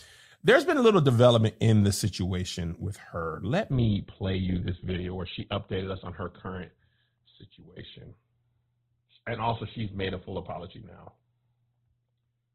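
Adaptive stream at a lower bitrate from 3.71 s: a slowed connection forces a sudden, gapless switch, and the speech turns muffled, with nothing above 4.2 kHz.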